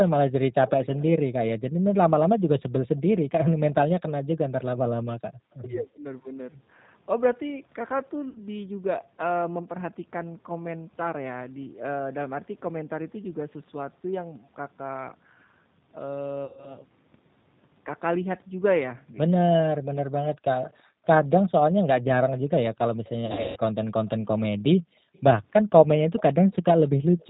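Throughout, the speech carries plainly audible G.729 codec damage: a rough, slightly synthetic edge that fits an 8 kbit/s G.729A stream rebuilding each frame from a filter, pitch and a few pulses. On a spectrogram, energy stops flat at 4 kHz, with smeared, grainy harmonics below.

At 8.29 to 8.40 s, 16.45 to 16.77 s and 23.26 to 23.59 s, VoIP packet loss concealed by the speech codec breaks in. About 60 ms, 120 ms, then 240 ms went missing, the last scattered over 300 ms with a 150 ms longest gap. The decoder repeats its last pitch and filter, so the sound turns into a buzzy, fading tone and stays weak briefly afterwards. A spectrogram shows frozen, evenly spaced harmonic stripes thinning out, and the waveform shows a decaying envelope.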